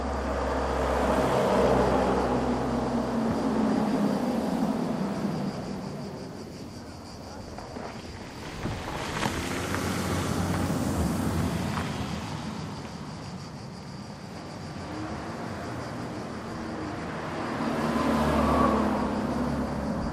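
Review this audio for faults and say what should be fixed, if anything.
Nothing to fix: no faults were found anywhere in this recording of sounds.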